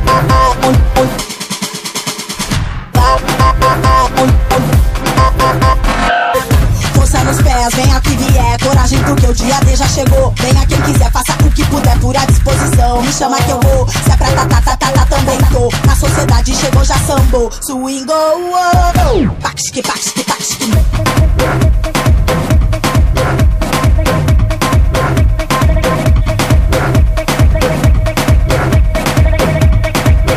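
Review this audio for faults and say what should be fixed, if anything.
No audible faults; nothing needs fixing.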